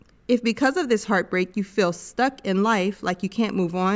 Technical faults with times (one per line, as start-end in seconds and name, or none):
none